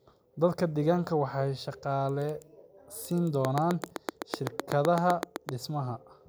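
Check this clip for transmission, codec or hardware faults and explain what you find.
A train of clicks runs from 3.45 to 5.50 s, at a regular 7.8 clicks per second, around fifteen in all. They peak about 15 dB above the speech. The cause is likely interference or a faulty connection. The clicks sound like steady ticking, heard through pauses too.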